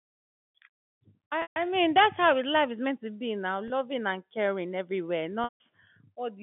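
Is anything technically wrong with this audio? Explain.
Yes. Packet loss with pitch repetition hits at 1.42 to 1.56 s, 3.68 to 3.70 s and 5.44 to 5.60 s. Packets dropped on this G.711 telephone line, and the receiver looped the last pitch period. The 20 ms gap sounds like a brief buzzy hold. The 140 ms and 160 ms gaps fade to silence before the speech cross-fades back.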